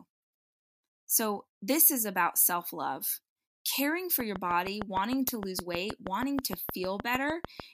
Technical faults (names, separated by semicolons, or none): train of clicks